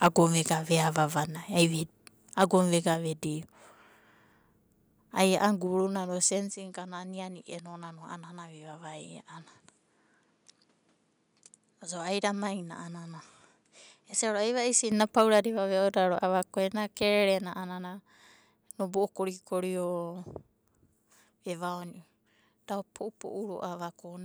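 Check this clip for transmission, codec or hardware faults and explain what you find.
The clip has two kinds of fault: brief microphone overload at three points and a stretch where the input appears to change to a poorer device.

Microphone overload occurs at 0.04 to 0.07 s, just before "vega veava", again at 2.42 to 2.44 s, and at 15.18 to 15.21 s. The likely cause is input gain set too high, so the loudest peaks ran past the converter's ceiling and had their tops flattened. The first burst overshoots by about 5 dB, with around 7 percent of its samples squared off. The later two overshoot by about 2 dB, with only a couple of percent clipped. Each one gives a short, harsh crackle on the peak.

Input switched to a poorer device from 6.5 s to 14.9 s. The sound likely moves to a different microphone or a headset profile, with no gap at either changeover. In that span the band is narrower, so the top end turns dull and boxy. 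The level drops by roughly 5 dB, and a new background noise floor appears about 45 dB under the signal. At 14.9 s the fuller, brighter tone returns.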